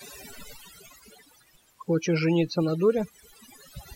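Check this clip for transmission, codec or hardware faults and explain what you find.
The speech is marred by overdone noise removal, present for the whole clip. A noise reduction stage was set far too aggressively, so any frequency band that came close to its noise estimate was pulled down hard or shut off, and the softer parts of the voice were caught along with the noise. The result is a background that drops and breaks up into twinkling, warbling specks.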